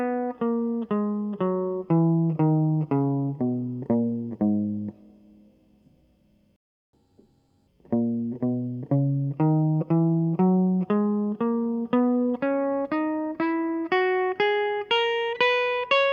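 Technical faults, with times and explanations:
6.56 to 6.93 s, playback stall: the music just cuts out mid-flow for about 370 ms, then picks up again. That's long enough to hear as a clear hole rather than a click, and it sounds like the player likely ran dry of buffered data or had its audio thread held up, so nothing reached the output until it got going again. Before the gap, the music runs at its normal pace.
6.93 to 7.67 s, catch-up at higher speed: right after the gap the music comes back rushed, running at 1.5 times normal speed for about three quarters of a second. Because the player resamples its backlog to win back the lost time, pitch rises along with tempo, by roughly seven semitones, close to a fifth, so everything sounds chipmunk-bright and hurried. Once it's caught up, speed and pitch drop back to normal.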